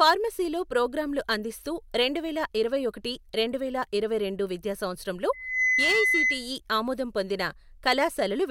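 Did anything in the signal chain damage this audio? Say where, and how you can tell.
Yes. From 5.33 s to 6.52 s a steady 2 kHz tone swells out of the speech over roughly a third of a second and then sits a few decibels above it, a classic loudspeaker feedback squeal. The damage is in the analogue acoustic path, before any conversion: the microphone is hearing the loudspeaker it drives, and at 2 kHz the loop gain tops unity, so that one frequency keeps re-amplifying itself.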